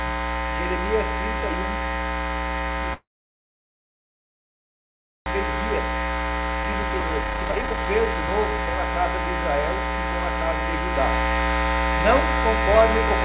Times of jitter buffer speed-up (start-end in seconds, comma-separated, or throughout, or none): 6.63-8.74